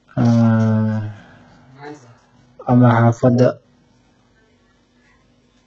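From start to finish the speech has a gritty, metallic treble, with s sounds lispy and nothing above about 7.9 kHz. This is heavy damage from likely HE-AAC compression at a very low bitrate, around 8 kbps, rebuilding the upper band by copying lower harmonics upward.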